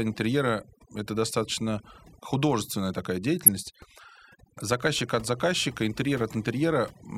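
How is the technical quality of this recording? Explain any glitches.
The quality is poor: the noise reduction is heavy-handed for the whole recording, and one short glitch interrupts the speech.

Overdone noise removal runs through the entire clip. The denoiser was set too aggressively, so any frequency band it judged close to the noise floor was pulled down sharply or switched off, taking the quieter parts of the voice with it. The background falls to near silence scattered with twinkling specks.

A corrupt frame decoded appears from 3.43 to 3.48 s, right after "это достаточно художественная такая". Damaged bits in a couple of compressed frames were decoded as if valid, so wrong gains and misread codes placed energy at frequencies where it didn't belong. The result is a brief burst lasting about 50 ms.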